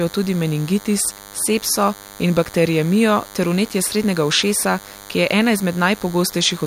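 A DECT cordless phone or its base station nearby is transmitting a short radio burst every 10 ms, and something in the audio chain is rectifying that burst into the signal. The result, the familiar DECT cordless phone buzz, runs from start to finish under the speech: a thin, steady buzz at 100 Hz packed with harmonics, sitting roughly 20 dB below the speech.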